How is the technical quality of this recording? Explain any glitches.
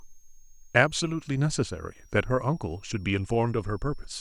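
A faint high whistle sits under the speech for the whole clip, drifting between about 5.36 and 6.52 kHz, roughly 35 dB below the voice. This is a switching supply whistle: a power supply switching in an audible burst mode, or beating against another supply, leaks its changing frequency into the audio path.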